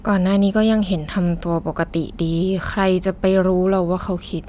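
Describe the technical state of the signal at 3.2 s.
At 3.2 s the speech signal is intact, with no audible fault.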